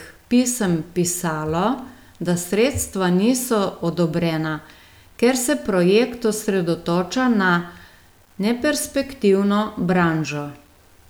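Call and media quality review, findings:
Low bit depth without dither, whole clip. Likely cause: requantisation to about 9 bits by plain rounding, no dither applied. Error tracks the signal rather than sitting as a steady hiss, roughly 40 dB below it. Result: grainy, level-dependent distortion on the speech, quiet syllables and word tails gritty or sputtering, quietest passages collapsing toward silence.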